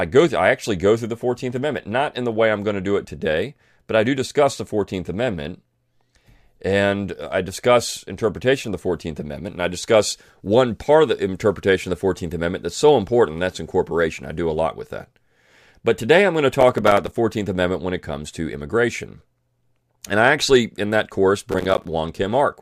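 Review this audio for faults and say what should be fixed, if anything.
Processor overload crackle occurs from 16.61 to 17.17 s and from 21.52 to 21.85 s. Many buffers of roughly 5 ms are missed, leaving short silent gaps. Reducing processing load or using a larger buffer prevents it.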